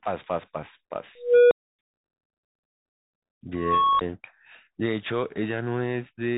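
Throughout, the speech has passed through a Bluetooth CVSD headset codec, which fits a 64 kbps stream. It encodes one up-or-down bit per sample with an adapting step, so the audio is narrowband, a granular hiss sits beneath it, s sounds turn scratchy, and loud high passages distort plainly. From 1.18 to 1.79 s an unstable filter runs away. A tone around 500 Hz swells over 327 ms into a clipped squeal and then drops to 277 ms of silence. From 3.56 to 4.01 s it happens again: a tone near 1 kHz grows for 438 ms and is followed by a 16 ms dropout.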